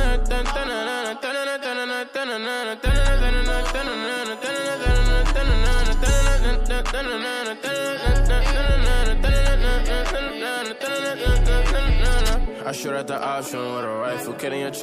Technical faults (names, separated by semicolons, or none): USB whine